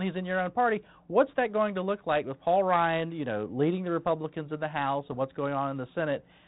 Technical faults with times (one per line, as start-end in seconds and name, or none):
5.06-5.15 bit errors on an ADPCM link